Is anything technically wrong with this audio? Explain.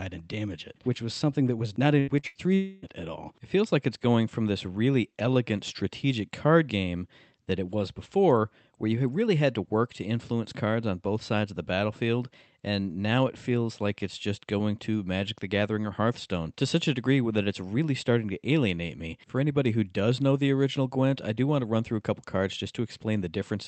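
Yes, there's a tight cluster of packet-loss damage between about 1.99 and 2.85 s, in speech that has come through a call codec with a top end that stops around 8 kHz.

Two bursts of packet loss come first, at 1.99 to 2.10 s and 2.27 to 2.38 s. Each loses about 80 ms of audio. The receiver stretches the last sound and fades it, so you hear a brief held buzz or fading hiss, then the speech jumps ahead.

Squeezed between them, at 2.19 to 2.26 s, is a short concealed packet loss of about 40 ms. The decoder patched the hole by continuing the previous sound and crossfading back, which comes across as a quick smear or wobble rather than a clean gap.

Then at 2.55 to 2.85 s there's what sounds like a long network dropout, likely the connection stalling, with about 280 ms gone. It never drops to silence. The concealment keeps a decaying buzz or hiss going for nearly the whole stretch before the speech picks up further on.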